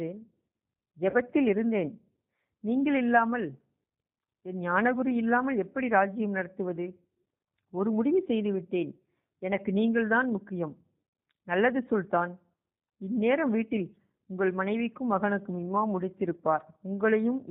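Throughout the speech, G.729 coding is plainly audible. The rough, slightly synthetic texture points to an 8 kbit/s codec that rebuilds each 10 ms frame from a filter, pitch predictor and a few pulses. A spectrogram shows a hard ceiling at 4 kHz.

At 1.10–1.17 s and again at 11.09–11.13 s, VoIP packet loss concealed by the speech codec appears. Each gap of about 40 ms fits two lost 20 ms packets. The decoder stretches its last pitch and filter into a fading buzzy tone or coloured noise, seen as a smeared, decaying patch in the spectrogram and a shrinking waveform envelope.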